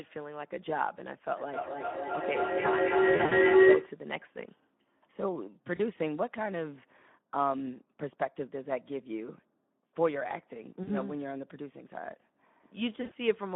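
Speex codec damage runs through the whole speech clip. The band sits roughly between 150 Hz and 3.5 kHz, and the voice sounds hoarse and grainy, which fits a low setting of about 11 kbps that leaves too few bits for the excitation.

Feedback howl runs from 1.38 to 4.02 s. Sound circles from loudspeaker back into microphone, gaining level each trip, and narrows to a tone near 400 Hz that pulses roughly every 300 ms. It peaks about 11 dB above the speech.

VoIP packet loss concealed by the speech codec occurs at 3.15–3.37 s (about 100 ms lost, scattered), 5.75–5.81 s, 10.83–10.90 s and 13.01–13.12 s. The decoder stretches its last pitch and filter into a fading buzz or coloured noise, and the voice stays weak briefly afterward.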